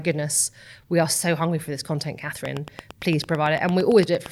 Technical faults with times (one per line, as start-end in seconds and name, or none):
2.45-4.27 train of clicks